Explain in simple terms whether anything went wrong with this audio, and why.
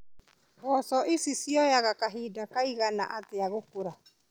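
Nothing went wrong here: the speech recording contains no audible technical faults.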